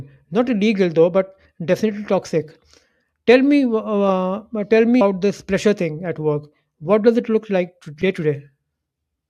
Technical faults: damaged data in a compressed stream

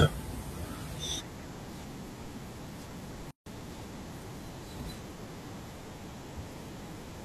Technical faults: gap at a join of encoded pieces

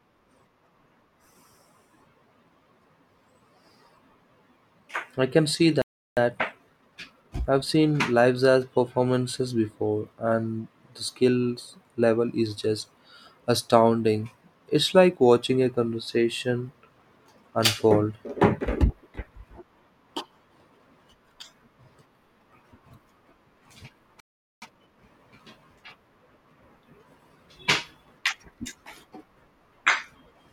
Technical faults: playback stall; time-compressed catch-up

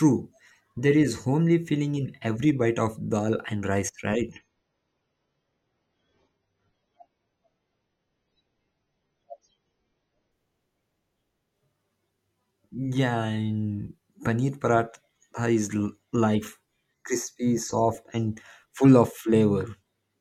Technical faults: adaptive stream at a lower bitrate; channel delay (comb filtering)

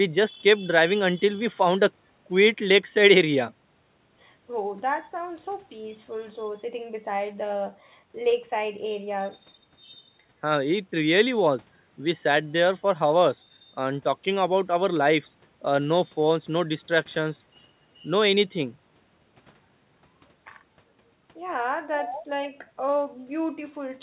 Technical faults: none

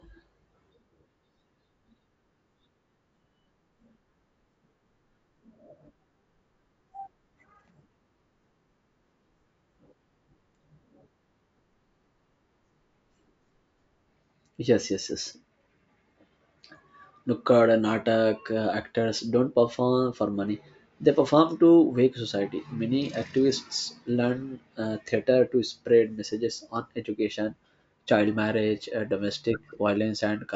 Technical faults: none

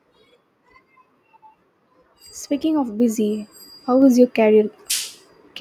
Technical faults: microphone volume stepped up

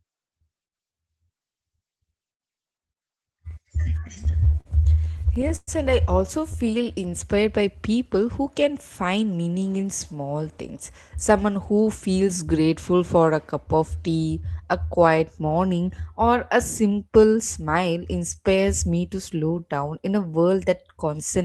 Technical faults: repeated stalls (stutter); jitter buffer slow-down; jitter buffer speed-up

